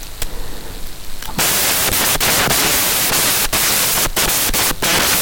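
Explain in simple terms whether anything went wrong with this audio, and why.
Something went wrong for the whole clip. Loud, harsh noise covers the speech from start to end, close to white noise on the loud parts. This is samples built from the wrong bytes. The player joined each sample's bytes incorrectly, so tiny fast-changing details became the loudest part.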